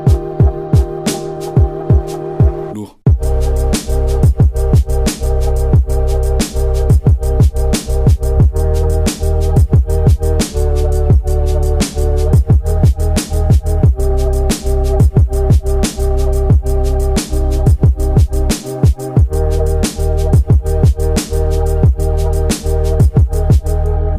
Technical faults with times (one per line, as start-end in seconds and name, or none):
10.49-12.28 drift correction step